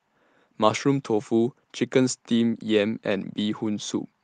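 Speech with no technical faults.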